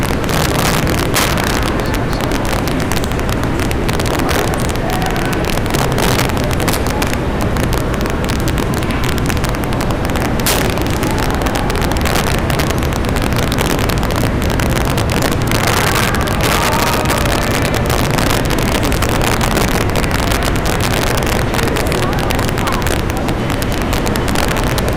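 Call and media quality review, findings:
Integer overflow throughout, on loud peaks: violent cracks, sharper than clipping. Gain roughly 12 dB too hot in a fixed-point stage; sums past full scale wrap to the opposite sign instead of saturating. Around 2% of samples affected. Waveform: peaks jump rail to rail in a single sample. Spectrogram: full-band vertical streaks at each loud event. Likely component: unclamped mixer or gain stage.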